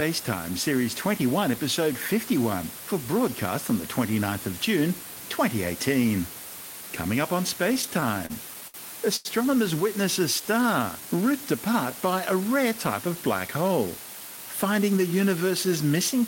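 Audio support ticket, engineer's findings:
Constant even hiss for the whole clip, only about 15 dB below the speech. Low bit depth with dither: roughly 5-bit quantisation, with the rounding error spread into white noise.

7.75–8.76 s, after "up on": repeated stalls (stutter). Eleven short holds, longest 64 ms, about 18% of the span concealed. The jitter buffer kept running empty, and the receiver stretched the last sound each time.

9.16–9.27 s: short stall from a late packet. Sound held about 90 ms until the packet arrived. Playout delay stepped up 90 ms, and nothing was lost.

10.19–11.33 s, before "apart by a rare": jitter buffer slow-down. Speech runs at 92% speed with the same pitch. The receiver repeated pitch periods, adding 95 ms to rebuild its reserve.

13.48–14.98 s, after "a rare type of": jitter buffer speed-up. Speech sounds hurried at 107% speed with the same pitch. The buffer was overfull, so about a tenth of a second of pitch periods was cut.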